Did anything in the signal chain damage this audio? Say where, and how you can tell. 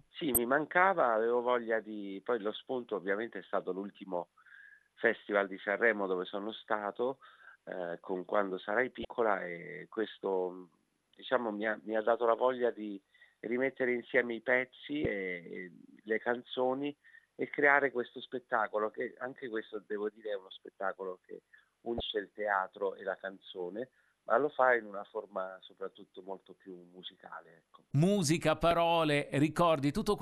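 Yes. Damaged data in the compressed stream, at the codec stage. Blips at 0.34–0.38, 9.02–9.05, 15.02–15.06, 21.97–22.01 and 28.71 s. Corrupt frames throw the decoder off sync.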